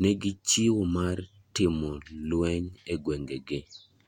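No technical faults can be heard anywhere in the speech. There is nothing in the recording that calls for a timestamp or an explanation.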